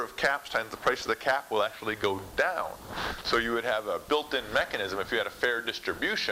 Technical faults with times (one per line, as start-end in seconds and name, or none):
0.00-6.31 low bit depth with dither